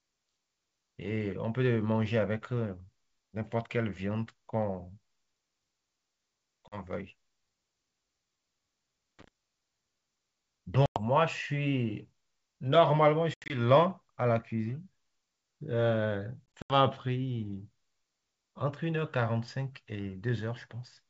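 At 6.68 s the speech drops into a hard-edged silent gap of 40 ms and resumes briefly, slightly distorted. Similar holes follow at 10.86 s (100 ms), 13.34 s and 16.57 s, the last two as 120 ms of scattered dropouts. This is packet loss on an ADPCM call, throwing the decoder's adaptive prediction out of step with the sender's. At 9.19 s a short, irregular burst of scratchy crackle is loose connector crackle, from a worn or dirty contact rapidly making and breaking.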